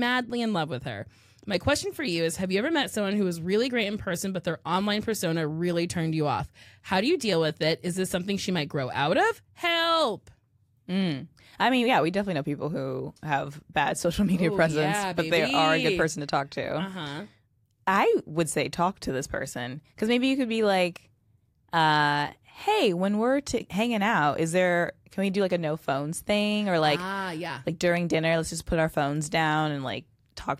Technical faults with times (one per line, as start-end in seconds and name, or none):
none